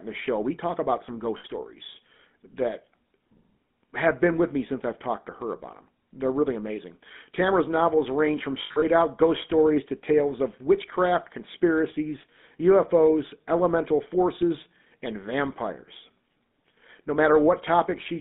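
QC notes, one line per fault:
Throughout, GSM full-rate codec: buzzy, gravelly roughness from pulse-driven vocal-tract modelling, band held to 200 Hz–3.6 kHz, which fits a 13 kbps phone link.
1.38–1.45 s, lost GSM frames: after "talk about some", 60 ms held as a rough metallic ring while the last good frame repeats, just before "stories that".
8.62–8.83 s, lost GSM frames: after "novels range from", about 140 ms of gaps scattered over 200 ms, longest around 70 ms, each ringing metallically before "out ghost stories to".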